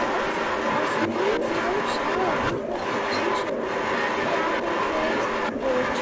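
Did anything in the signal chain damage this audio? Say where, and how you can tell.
Yes. An echo leak runs through the whole clip, from 0.0 to 6.02 s, at the call-processing stage. A second copy of the speech trails the direct sound by about 327 ms, at roughly the same level, so the speech comes back about a third of a second later. The likely cause is a far-end loudspeaker feeding its microphone, with the echo canceller letting that pickup pass back down the call.

Speech suppressed in double talk appears from 2.66 to 2.73 s, also in the call processing. For about 70 ms the talker's level drops sharply, by roughly 15 dB at the deepest point, before recovering. The likely cause is the echo canceller misreading overlapping speech from both ends as echo and pulling down everything it captured, including the real talker, during that overlap.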